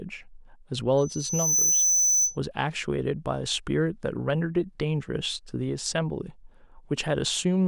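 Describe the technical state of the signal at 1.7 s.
At 1.7 s you're right in the middle of a loudspeaker feedback squeal that runs from about 0.97 to 2.38 s. The mic is picking up the speaker it feeds, and at 6 kHz the loop gain tips past one, so that frequency keeps reinforcing itself. You hear a thin, piercing tone swell up over the first 0.7 s or so, ending up roughly 5 dB louder than the speech underneath.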